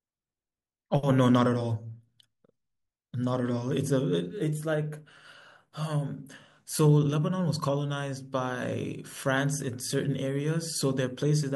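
At 9.59 s, likely dropped samples: about one sample goes missing, so the waveform jumps to a later value, producing a single sharp click in the speech.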